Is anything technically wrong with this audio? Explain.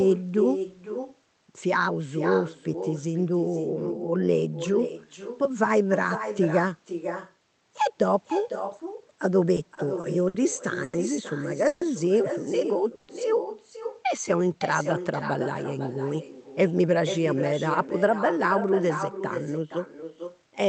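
Yes. This is speech carried over a call path, which also band-limits it to about 8 kHz, and it has several faults.

Throughout, there is echo with no canceller. The far end's loudspeaker feeds its microphone, so every phrase returns about half a second later, about 9 dB quieter and thin.

From 9.55 to 10.35 s, repeated stalls (stutter) occur. The jitter buffer ran dry five times, the longest for 60 ms, and the receiver held the last sound each time, so the speech drags and stutters.

From 10.84 to 10.94 s, there is a short stall from a late packet. A packet arrived about 90 ms late, and the receiver stretched the preceding sound, which is heard as a held syllable with a slight buzz or dip.

Two call audio freezes occur, at 11.67 to 11.82 s and 12.95 to 13.09 s. Each is a fading buzz or hiss lasting about 0.13 to 0.14 s before the speech resumes where it stopped, likely caused by packets held up in the network.

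From 14.16 to 15.00 s, there is a jitter buffer slow-down. Repeated pitch periods add 84 ms, so the speech runs at 91% speed with unchanged pitch and drawn-out sounds.

From 16.72 to 20.67 s, there is a jitter buffer speed-up. Removing short pitch-period pieces trims about 0.3 s, so the speech runs at 107% speed and sounds slightly hurried at the same pitch.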